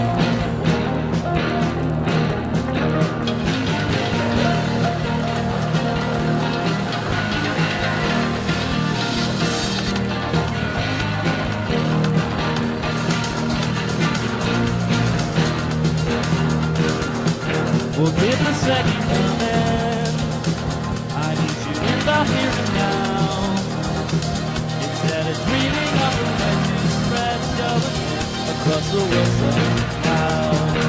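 From the start to about 15.4 s, a resampler restarted on every block puts a steady tick pattern on the sound at 20 per second. The conversion from 44.1 kHz to 16 kHz appears to have handled each 50 ms block in isolation, so every block edge was filtered without its true neighbouring samples and carries a small error. Unlike hum, this 20 Hz buzz follows the signal and vanishes in quiet passages. Unlike dropouts, no audio is missing.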